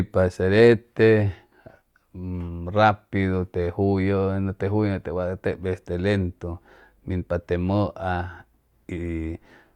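Nothing in this speech recording stands out as a technical fault at any point, so there's nothing here to flag.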